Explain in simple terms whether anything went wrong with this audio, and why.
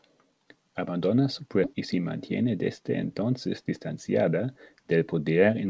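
Two things went wrong with the call's incoming audio.

First, a skip ahead at about 1.64 s. A chunk of audio, roughly 400 ms, was dropped, either on the way or by the receiver, while newer audio was already waiting. Playback jumps straight from one point to a later one with no pause to cover it, so a piece of speech simply goes missing right before "y se". The two sides are joined almost directly.

Second, a jitter buffer speed-up from about 2.43 s to 3.24 s, just after "y se". The receiver had built up more stored audio than it wanted, so it trimmed tiny slivers, each only a pitch cycle or so long, over and over, removing about a twentieth of a second in total. The speech plays about 5% faster while keeping its normal pitch, which makes that stretch sound hurried.

The call codec limits the sound to nothing above 8 kHz, which is how this kind of call link normally sounds.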